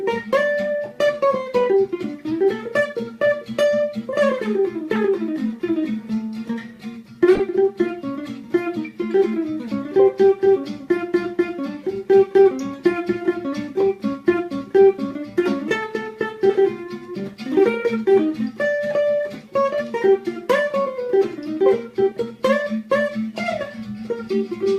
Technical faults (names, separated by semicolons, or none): corrupt frame decoded